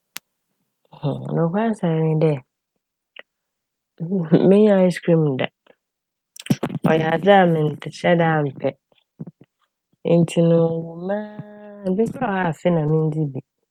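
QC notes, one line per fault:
No audible faults found in this speech recording.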